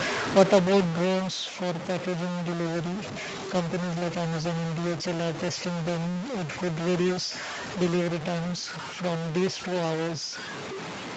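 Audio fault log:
Throughout, stuck bit: a distortion rides on the speech, and even the pauses carry a steady hiss where silence should be. The likely cause is one converter bit held fixed, pushing about half the samples off by its weight. On a waveform the quiet gaps show a constant fuzzy floor, and a spectrogram shows broadband grit filling the pauses.
0.05–1.75 s, automatic gain falling: the speech starts loud, then sinks by about 9 dB along with its background noise as the gain control backs off after judging the input too hot or its background noise too strong. A waveform shows the envelope tapering steadily over those 1.7 seconds, while the spectrogram dims evenly across all bands up to its 8 kHz ceiling, which comes from the call path.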